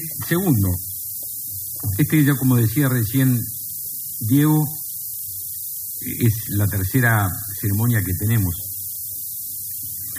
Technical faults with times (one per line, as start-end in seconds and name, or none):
0.00-10.19 low bit depth with noise shaping